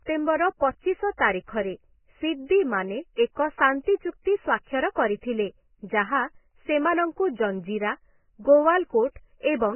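From start to finish the speech is dull and muffled, with nothing above 3 kHz, while what remains sounds hissy and grainy: tones are roughened and consonant onsets smeared. This is likely Vorbis compression applied heavily, at a setting that points to a very low bitrate near 10 kbps. The encoder has dropped its cut-off to 3 kHz and quantised the remaining upper band so coarsely that fine detail has turned into noise of similar energy.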